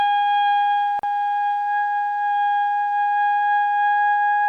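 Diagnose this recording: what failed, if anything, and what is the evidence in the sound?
The failure sits at the codec stage: a gap at a join of encoded pieces. From 0.99 to 1.03 s the continuous sound drops out for about 40 ms, then resumes exactly where it left off. The audio was evidently encoded in separate pieces of about 4 s and concatenated without trimming, so the encoder's start-up delay and final-frame padding remain as silence. A waveform shows a flat-line notch with slightly smeared edges; a spectrogram shows a narrow vertical blank band across all frequencies.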